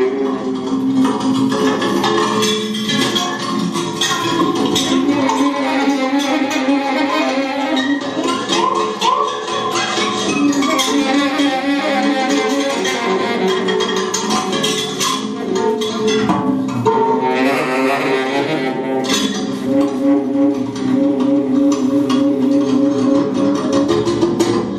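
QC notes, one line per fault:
Nothing stood out on listening.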